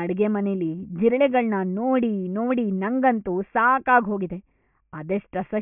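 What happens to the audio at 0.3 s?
Nothing goes wrong at 0.3 s; the speech plays through that moment intact, with no dropout, click or distortion.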